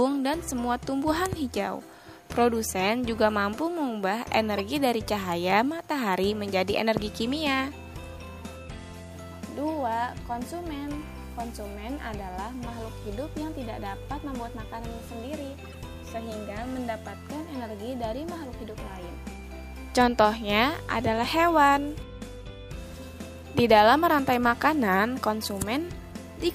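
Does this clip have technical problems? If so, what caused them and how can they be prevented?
Yes. Corrupt frames were decoded at 4.54 to 4.60 s, at 12.34 s, and at 15.65 to 15.77 s. Flipped bits gave the decoder wrong gains and codes, and it played them anyway. Energy landed at wrong frequencies as brief chirps, squeaks, blips or bursts of noise, loudest at 4.54 s. Checksums with concealment of damaged frames would prevent this.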